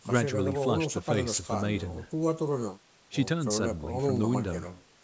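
Nothing stood out on listening to this speech, which carries the usual call microphone processing with its trimmed lowest bass and nothing above 8 kHz.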